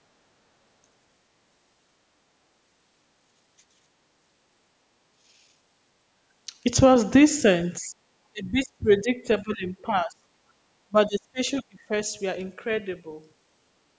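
A speech recording from a call, band-limited to nothing above 8 kHz by the call's microphone processing, where an echo canceller facing both sides talking at once likely could not separate the near talker from the loudspeaker echo, producing speech suppressed in double talk. The voice dips by about 15 dB at 7.8 to 7.94 s, then fades and breaks up from 8.31 to 10.27 s and again from 10.88 to 11.92 s, sinking by as much as 25 to 30 dB. Separately, the canceller clamped the microphone while the loudspeaker played, so the background is gated by the echo canceller: the room sound drops by about 11 dB for a brief moment at 10.55 to 10.6 s before returning.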